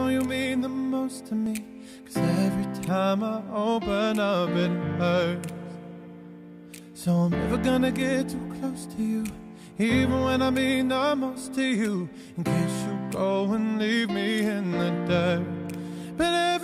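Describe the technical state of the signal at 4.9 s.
At 4.9 s the audio is intact, with no audible fault.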